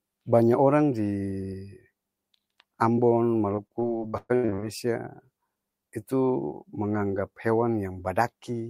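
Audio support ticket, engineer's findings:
Repeated packet loss (robotic sound), 3.55–4.64 s. Speech turns choppy, with pieces dropped. Probable component: network jitter buffer and loss concealment. Roughly a dozen holes, longest 118 ms, patched by stretching the previous sound; about 40% of the span is synthetic fill. Spectrogram: smeared, repeated harmonic bands with abrupt cuts. Waveform: short, periodic-looking repeats broken by sudden envelope jumps.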